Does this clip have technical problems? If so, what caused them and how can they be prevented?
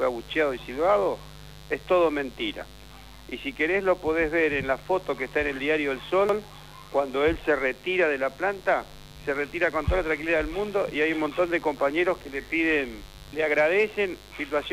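Yes. A mains buzz runs through the whole clip. It is a steady, raspy tone built on 50 Hz harmonics reaching into the kilohertz range, around 25 dB below the sound. Switching spikes from a dimmer, rectifier or unshielded cable leak in twice per mains cycle. To prevent it, use shielded balanced cables and keep audio gear away from dimmers and switching supplies.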